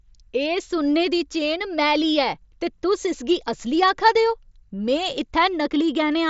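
No technical faults are audible.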